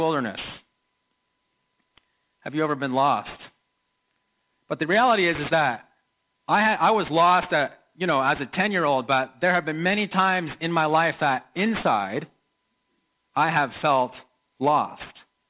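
Aliasing runs throughout: content above 4 kHz folds back as unrelated, gritty tones sitting clearly below the main sound, fitting an unfiltered drop to 8 kHz, unlike a clean low-pass that merely dulls.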